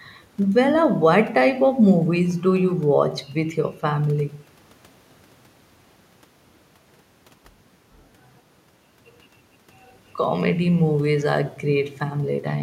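Speech recording with no audible technical faults.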